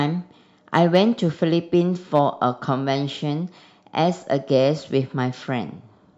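From 0.75 to 0.98 s and again from 2.15 to 2.44 s, the speech is pushed about 2 dB past what the signal path can carry, so hard clipping cuts the peaks flat, giving a brief crackle. The waveform shows squared-off tops, and the spectrogram shows vertical smears of high harmonics. At 4.56 s a single peak just touches that ceiling.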